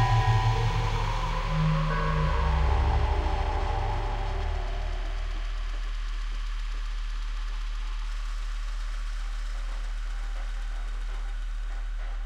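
Sound recording, no technical faults detected.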